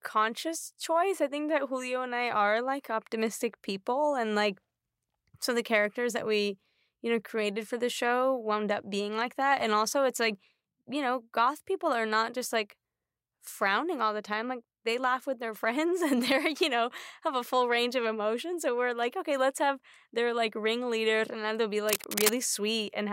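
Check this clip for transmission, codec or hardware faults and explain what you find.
One hardware fault shows up, near the end of the speech. From 21.88 to 22.36 s, just after "like ringleader they'll be", a dense, uneven scratching and rustling runs over the sound for about half a second, roughly as loud as the speech itself. This is cable scratch noise. The likely cause is a worn cable, connector or control being moved, so its contact resistance jumps around rapidly and injects those ragged noise bursts into the signal.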